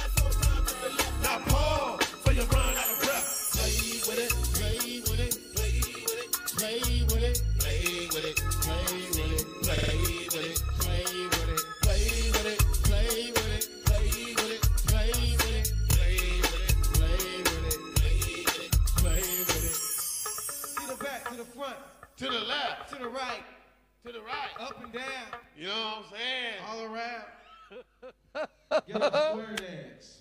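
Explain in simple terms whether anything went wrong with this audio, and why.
The audio has repeated frames. Small chunks of sound play again, causing brief stutters at 0.76, 9.77 and 15.91 seconds. Each chunk is about 26 or 52 ms, repeated up to three times. The audio becomes slightly longer.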